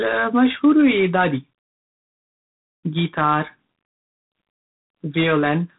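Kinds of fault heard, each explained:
G.726 ADPCM: A harsh, rasping hiss rides on the speech throughout, rising and falling with its level, and nothing above 3.8 kHz remains. Each sample is coded as a coarse difference from a prediction, and this much grain fits the 24 kbit/s mode.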